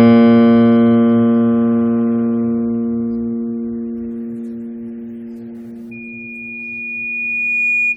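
From 5.91 s to the end of the music at 7.96 s, a loudspeaker feedback squeal takes over. A microphone is hearing its own loudspeaker, and at 2.4 kHz the loop returns more than it sends, so that single tone feeds on itself. Over roughly two seconds it swells until it stands about as loud as the music. Its fixed pitch and steady self-driven growth set it apart from a tonal hum or whistle, which would sit at a constant level rather than climbing.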